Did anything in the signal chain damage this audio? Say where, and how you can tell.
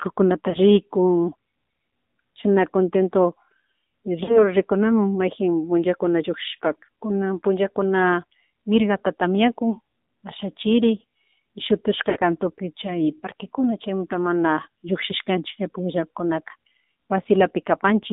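Yes. The damage happened at the codec stage. The whole clip went through an AMR narrowband mobile codec, and the speech has the buzzy, synthetic edge of AMR-NB at a low rate, which fits about 7.4 kbps. The line is band-limited to roughly 200 Hz to 3.7 kHz. On a spectrogram there is a hard ceiling just under 4 kHz with nothing above it and an empty floor below 200 Hz. The harmonics look smeared because the vocal-tract model is rebuilding them from very few pulses.

In the network path, lost AMR speech frames cause three short breaks, at 0.50 to 0.57 s, 4.24 to 4.52 s and 12.10 to 12.19 s. The concealed spans are 40 ms, 40 ms and 60 ms, which fits two, two and three 20 ms frames. In each gap the decoder reuses the last good pitch and spectral settings while lowering the gain. The spectrogram shows a brief frozen, repeated pattern, and the waveform shows a fading envelope. The speech then restarts weak or rough for a moment.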